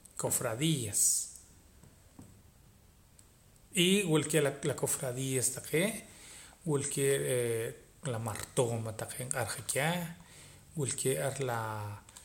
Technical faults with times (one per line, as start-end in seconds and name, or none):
none